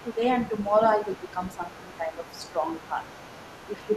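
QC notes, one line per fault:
0.00–0.17 s, 0.37–0.86 s and 1.05 s to the end: other side's voice leaking through. The echo canceller likely left part of the loudspeaker playback in the microphone signal. A second, fainter voice sits roughly 25 dB under the talker.
0.02–0.22 s, 0.96–2.68 s, 2.88–2.99 s and 3.67 s to the end: speech suppressed in double talk. With both sides active, the canceller likely could not separate its own talker from the echo and turned both down. The talker's level dips in pieces, by about 10 dB at the start and end and about 5 dB in between.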